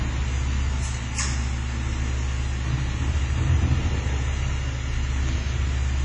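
Everyday sounds run the full six seconds with heavy codec damage throughout, likely from WMA compression at a low rate, which fits a 24 kbps setting. Transients ring and smear, quieter detail is washed away, and a hiss swells and fades with the louder sounds. On a spectrogram the content stops at a flat ceiling near 10.4 kHz, weak components appear as patchy gaps between blocks, and attacks in the waveform show pre-echo smudged across tens of milliseconds.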